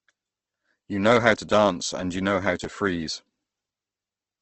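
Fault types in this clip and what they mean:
Opus compression: The speech was most likely squeezed through a low-rate Opus encoder in its music mode, where too few bits forced it to rebuild some frequency bands from folded lower content or noise rather than the real detail. Throughout the clip this leaves the speech rough and grainy, with a hissy, noisy texture on its tones, and nothing survives above 8.2 kHz, which fits a bitrate around 16 kbps.
Chunks out of order: A 10 ms block of audio was delivered or written one slot late, so it plays after the block that should have followed it. The sound itself is all there, but the sequence is scrambled and three abrupt joins appear where the mismatched edges meet. Between 2.64 and 2.66 s this comes across as a brief jumbled stutter in the speech.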